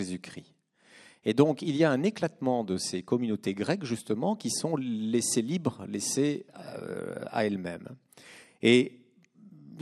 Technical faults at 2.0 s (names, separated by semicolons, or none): none